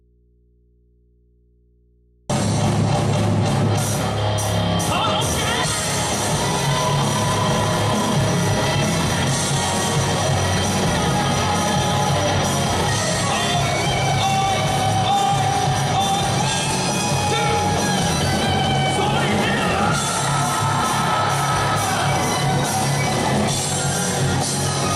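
From the start until 2.30 s the clip is in an audio dropout to a faint residue: the wanted signal is absent and only mains hum remains, roughly 35 dB below normal level, likely from an open input left live. The waveform sits nearly flat, the spectrogram showing only low hum lines until full content returns abruptly.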